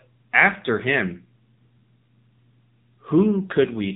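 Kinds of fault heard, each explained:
AMR narrowband mobile codec: the speech has passed through the 2G/3G phone codec at 7.4 kbps, the low bitrate the sound points to. Nothing survives above about 3.8 kHz, and the voice carries a plainly audible buzzy, synthetic quality from the pulse-driven vocal-tract model, which sets it apart from a plain low-pass filter.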